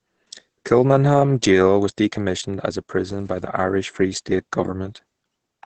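Opus voice compression runs throughout this speech. Heavy SILK coding at a rate that fits 10 kbps cuts everything above 8.8 kHz, leaving speech muffled, hoarse and slightly robotic.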